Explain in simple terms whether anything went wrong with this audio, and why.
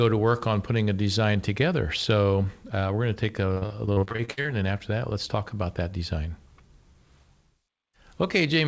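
Between 3.54 and 4.47 seconds, right after "we're going to take" and just before "and then after that", the call suffered repeated packet loss (robotic sound). Over a dozen small chunks of audio, none longer than 60 ms, failed to arrive in time, and the receiver covered each hole by stretching out the last bit of sound. Those patches fill about 40 percent of that stretch, so the speech turns choppy and robotic.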